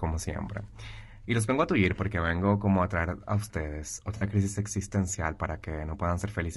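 Throughout, the speech has likely passed through low-delay AAC compression. Its short frames resolve pitch harmonics poorly at a rate that fits about 32 kbps, so the voice sounds plainly rough and grainy, with noise between harmonics and a thin, synthetic top band.

AAC frame loss with concealment follows from 0.45 to 0.48 s and again from 4.17 to 4.23 s. The decoder rebuilt missing frames from the previous spectrum, consistent with one lost frame and then two, leaving brief smeared, noisy, phasey patches.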